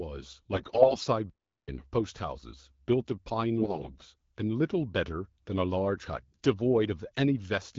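AMR bit errors at 0.53–1.06 s (the roughest), 3.60–4.05 s and 6.16–6.46 s: flipped low-priority bits scramble the excitation pulses, so the speech goes hoarse and gargly.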